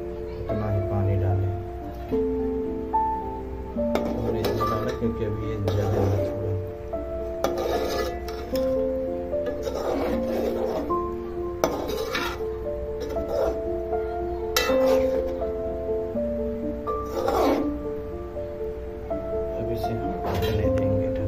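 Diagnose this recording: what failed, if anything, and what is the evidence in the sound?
A loud pop at 4.45–4.47 s and again at 20.78–20.80 s, each a single thump roughly ten decibels above the sound, which continues underneath rather than dropping out. The likely cause is an analogue voltage pulse from a plug, switch or static discharge.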